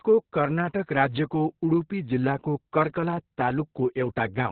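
Speech throughout shows Opus voice compression at a heavy level: nothing above about 4.3 kHz survives, giving a muffled, boxy narrowband sound, and the coarse SILK excitation coding adds hoarseness and a slightly robotic edge, which fits a bitrate near 6 kbps with long 60 ms frames.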